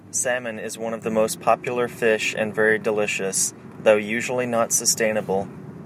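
At about 1.02 s there's a microphone volume step-up. The call software decided the mic was running too quiet and bumped the device's input volume in a single jump instead of easing it up, so the level leaps by about 7 dB almost instantly. You hear the voice and the room noise behind it get louder together at that moment, and everything after it sits at the new, louder level.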